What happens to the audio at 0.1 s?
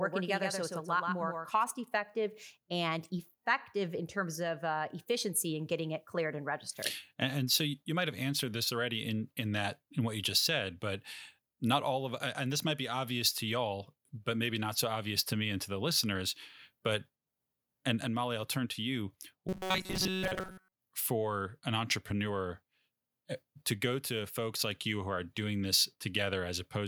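At 0.1 s there's a doubled audio track: a dry copy about 150 ms behind and about 5 dB quieter runs from the start until 1.64 s, just before "effective and effective in", likely from a second, slower capture path.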